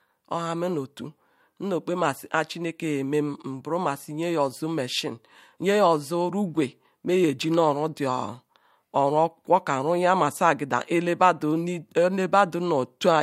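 No technical faults are audible anywhere in this recording.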